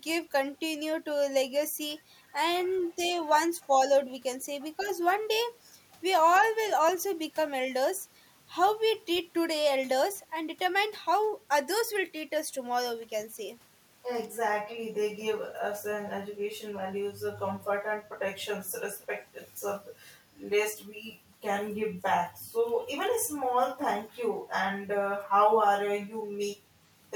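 At 2.77 to 2.95 s and again at 3.61 to 3.67 s, faint scraps of echo leak appear. A copy of the speech returns 247 ms late, roughly 35 dB below it. The likely cause is a far-end echo canceller letting loudspeaker pickup slip back.

At 4.8 to 4.88 s comes speech suppressed in double talk. For about 70 ms, the speech dips by roughly 10 dB. Both sides were likely talking at once, so the canceller turned down the talker along with the echo.

The same faint, 247 ms echo leak returns briefly at 6.35 to 6.39 s and 19.0 to 19.06 s. Each scrap is short.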